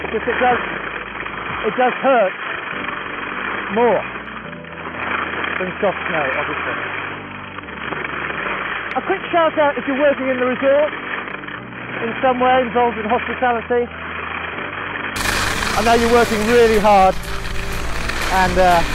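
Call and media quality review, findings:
Dull, boxy band-limited sound from 0.0 to 15.16 s, then sudden return to full bandwidth with no gap at the change. Likely an input switched to a poorer device, such as a headset call profile. Nothing above 3.2 kHz during that span; spectrogram shows a hard ceiling there, widening abruptly at 15.16 s. Waveform level a few dB lower before the change (around 5 dB). Faint added noise floor, well below the signal, disappearing at the switch.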